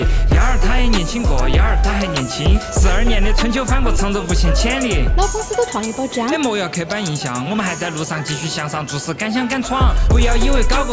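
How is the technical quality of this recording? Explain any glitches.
Nothing stood out on listening; no glitches were heard anywhere in the recording.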